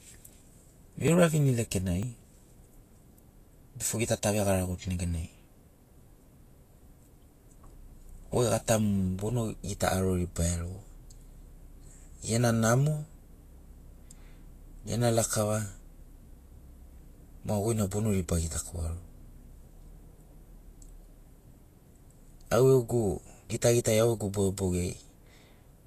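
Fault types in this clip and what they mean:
Vorbis compression: The encoder likely ran at a low quality setting, consistent with a bitrate near 35 kbps. It kept only a smooth spectral outline plus coarsely quantised detail on top. The cut-off is lowered, and the remaining treble is rebuilt so roughly that fine detail turns to noise. Throughout the speech this gives a plainly audible hissy, grainy coating, roughened vowel tones and softened consonant attacks.
Dropped buffer (overrun): The capture program likely fell behind, and the hardware overwrote samples before they were collected. Each lost stretch is missing entirely, with the audio on either side butted together and no silence between. This happens at 1.08 s and 5.04 s, each losing around 10 ms, and at 2.03 s, losing around 30 ms. Each is heard as a small forward skip in the speech.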